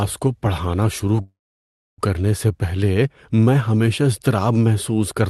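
From 1.21 to 2.01 s, a call audio freeze adds a fading tail and 0.65 s of silence, likely from an emptied jitter buffer. Nothing is lost.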